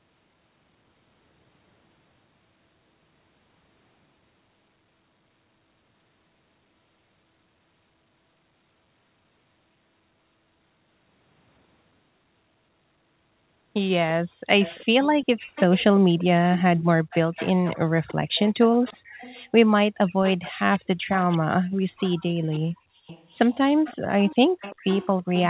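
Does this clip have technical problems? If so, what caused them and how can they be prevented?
Yes. An echo leak appears at 14.6–15.84, 16.18–19.49, 20.07–20.8, 21.11–21.38, 21.96–22.6, 23.07–23.53 and 23.84 s to the end: a faint copy of the speech trailing by 343 ms, roughly 15 to 25 dB down. The likely cause is a loudspeaker on the far end whose echo canceller let residual pickup through. Headsets or a properly converged echo canceller would prevent it.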